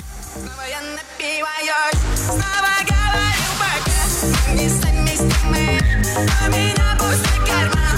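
No technical faults can be heard anywhere in the clip. The audio holds steady from the first moment to the last, with no break or disturbance at any point.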